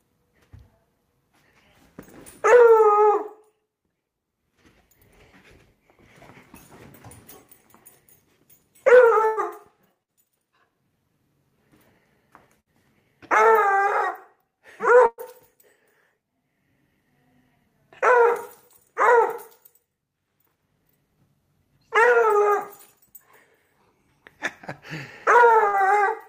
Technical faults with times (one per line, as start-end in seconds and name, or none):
9.25-9.40 burst of packet loss
10.03-10.11 burst of packet loss
12.60-12.69 burst of packet loss
15.06-15.21 burst of packet loss
25.68-25.76 burst of packet loss